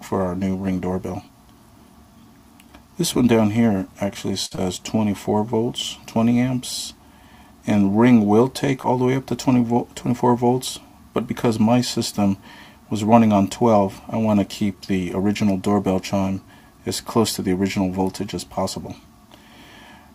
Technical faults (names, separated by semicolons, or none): short stall from a late packet; short concealed packet loss